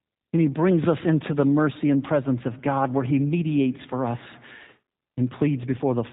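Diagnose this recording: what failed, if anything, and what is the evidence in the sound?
Throughout the speech the sound is band-limited and faintly rough, with a buzzy, synthetic edge and no content above 4 kHz. The fault sits at the codec stage: G.729 codec damage that is plainly audible and consistent with an 8 kbit/s coder. Rather than sending the waveform, the coder rebuilds each 10 ms frame from a vocal tract filter, a pitch predictor and a few sparse pulses. That coarse excitation produces the roughness, and the narrowband path removes everything above 4 kHz.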